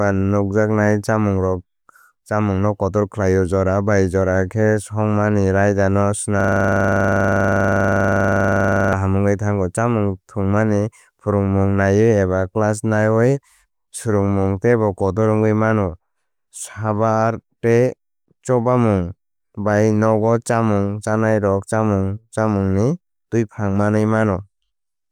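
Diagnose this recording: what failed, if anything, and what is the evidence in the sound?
A system hang loop at the driver or buffer stage: the host stalled while the audio hardware kept replaying one 40 ms ring buffer. From 6.40 to 8.93 s, right after "khe shongmani raida no", the speech becomes a rapid, rattling 25 Hz stutter of dozens of identical repeats.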